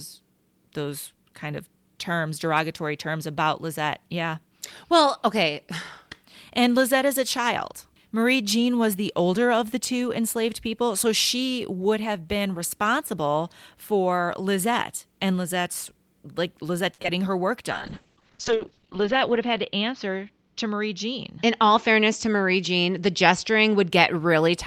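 A short stall from a late packet comes first, at 16.94 to 16.99 s. A packet arrived after it was due, so the jitter buffer drained and the receiver held the last sound for about 40 ms until the packet turned up, then resumed from the same point. Nothing is lost, but the sound hangs slightly too long with a faint buzzy sustain, and playback runs about 40 ms later from here on.

Two short concealed packet losses follow just before "her work", at 17.02 to 17.05 s and 17.07 to 17.08 s. In each, audio failed to reach the decoder in time, so the receiver extended the preceding sound to cover the gap and blended back into the real signal. The first patch spans about 16 ms over 10 ms of missing audio. The second fills only about 6 ms while about 20 ms goes missing. Both come across as a quick smear or wobble, and the second clips a little of the sound outright.

A call bitrate drop starts after "her work", at 17.72 s, and runs to 23.97 s. 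The bandwidth estimate fell and the encoder was pushed from 40 kbps down to 9 kbps. At that rate Opus codes more coarsely and narrows the audio band from 20 kHz to 8 kHz. The sound turns muffled and watery, with the top end gone, and is at its worst for about 1.2 s at the lowest rate before the bitrate climbs back.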